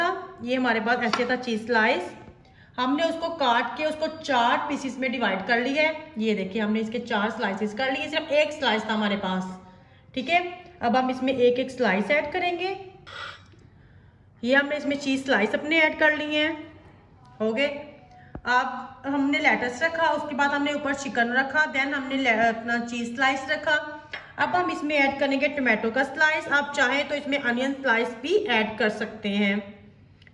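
No technical faults are audible.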